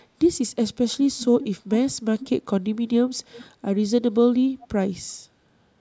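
Faint delayed copies of the speech, trailing it by 387 ms, surface at 1.18–1.47 s, 1.71–1.77 s and 2.2–2.29 s at about 15 dB down, and at 4.62–4.67 s at about 25 dB down. This is likely echo leak, loudspeaker sound slipping past an echo canceller.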